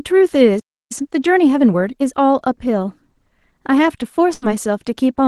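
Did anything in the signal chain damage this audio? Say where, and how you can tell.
Yes. The speech stops dead at 0.59 s and stays silent until 0.92 s, about 0.31 s. It then resumes mid-flow. This is a playback stall. The likely cause is a player buffer running dry or a blocked audio thread, so nothing reached the output.

From 0.92 s to 2.14 s the speech is hurried, about 1.25 times normal speed, yet its pitch stays unchanged. This is time-compressed catch-up. The player drains the backlog from the stall by cutting small slices and cross-fading across them.

Between 2.67 s and 3.68 s the sound runs about 5.7% fast and rises roughly 96 cents, nearly a semitone. Then it snaps back. That is a drift correction step. Clock-matching software in the driver or buffer stage likely changed the rate abruptly to rebalance its buffer.

At 4.34 s a burst of packet loss hits the network path. For about 81 ms the receiver stretches the last sound and fades it down. 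The speech then jumps ahead to 4.45 s, with about 80 ms of audio simply gone.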